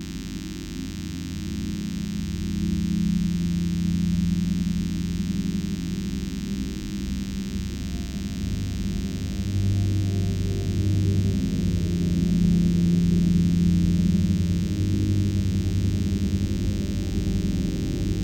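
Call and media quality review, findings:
DECT cordless phone buzz, whole clip: thin 100 Hz buzz about 20 dB under the sound; nearby DECT burst radio rectified in audio path. Spectrogram shows a harmonic comb every 100 Hz.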